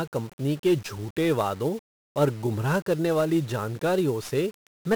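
Speech runs through heavy 1-bit DFPWM compression from start to end. Each sample keeps only one bit that nudges a tracking level up or down. That leaves dense broadband noise. The sound is fuzzy and crackly throughout. Hiss buries the treble. The damage fits a rate near 48 kbps.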